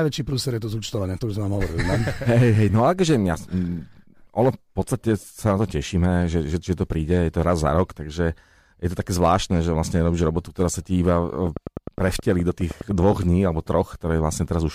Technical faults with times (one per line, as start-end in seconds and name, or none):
11.47-13.24 train of clicks